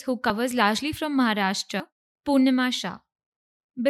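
At 0.3 s, just before "largely from", and again at 1.8 s, the speech jumps ahead, likely a dropped buffer (overrun) losing roughly 40 ms and 70 ms; the waveform shows an abrupt splice and the spectrogram a thin vertical line.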